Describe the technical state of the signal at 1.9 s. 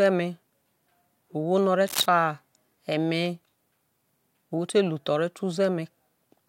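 Cable scratch noise runs from 1.86 to 2.06 s, likely from a worn cable or connector being moved so its contact resistance fluctuates rapidly. The result is a dense, irregular burst of scratchy rustling sitting only a few decibels below the speech.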